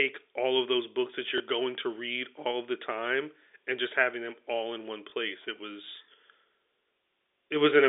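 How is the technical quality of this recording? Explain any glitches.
The speech carries two brief glitches, at 1.38 to 1.40 s and again at 5.10 to 5.12 s, heard against the narrow band of a G.711 telephone line that passes roughly 300 Hz to 3.6 kHz.

Both glitches sound like a tiny mechanical hiccup. They come from packet loss with the last packet repeated. About 20 ms of audio went missing each time, which fits a single lost 20 ms packet. The receiver replayed the previous chunk in place of the missing one.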